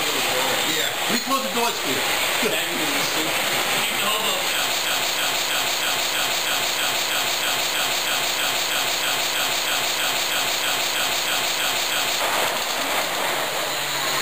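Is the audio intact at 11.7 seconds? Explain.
No. From 4.85 s to 12.20 s a broken-record loop repeats one 0.32 s fragment 23 times back to back, likely from a stalled player or stream. On a spectrogram identical blocks recur every 0.32 s, and the waveform shows the same shape stamped repeatedly.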